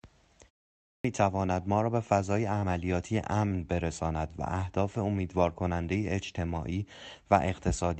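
At 0.82 s, after a pause of about 0.4 s, the sound enters abruptly with roughly 224 ms missing up to 1.04 s. This is a clipped start after a pause: the output device had gone idle during the silence and took time to wake, swallowing the opening sounds.

At 3.48 s there is a short stall from a late packet. A packet arrived late, the jitter buffer briefly ran dry, and the last sound was held for about 20 ms until playback resumed from the same point, with nothing actually lost.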